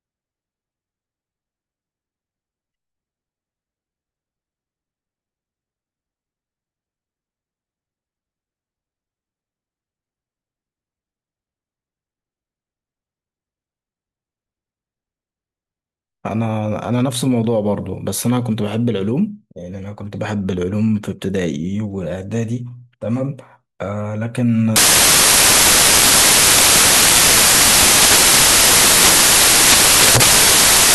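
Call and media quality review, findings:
Samples built from the wrong bytes, 24.76 s to end of clip (30.94 s): speech replaced by loud, harsh broadband noise, near white on loud passages. Probable decoder/reader byte misalignment or swapped byte order; low-order bits landing in high-order positions.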